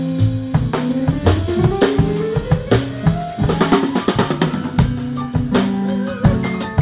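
No technical faults can be heard in this audio.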